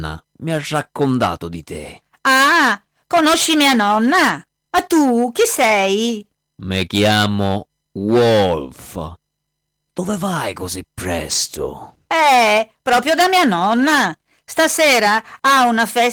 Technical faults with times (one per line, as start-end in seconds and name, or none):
none